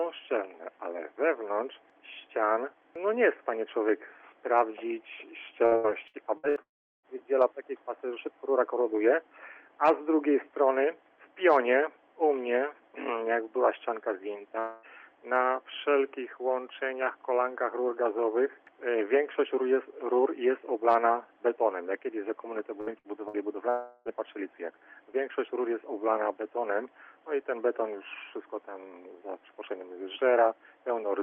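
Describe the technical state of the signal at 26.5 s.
At 26.5 s the signal is intact, with no fault present, only the steady character of the WebRTC call path it passes through.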